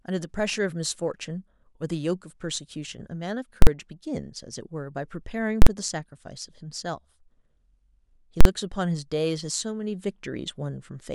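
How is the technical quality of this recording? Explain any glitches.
The speech is interrupted three times by loud bangs, from 3.62 to 3.67 s, 5.62 to 5.67 s and 8.41 to 8.45 s. Each is an invalid numbers at full scale fault. A calculation produced infinite or invalid values, so the output jumped to maximum level for about 46 ms, which fits a 2048-sample block, and the speech dropped out beneath it.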